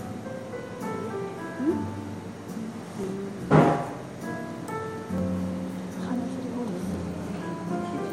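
Dropped samples at 2.21, 3.04, 4.04 and 5.18 s: each is a single sharp click, likely from under a millisecond of audio missing, making the waveform jump abruptly.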